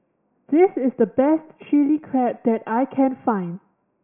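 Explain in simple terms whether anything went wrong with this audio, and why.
Listening to the recording, nothing stood out as having gone wrong with the speech at any point.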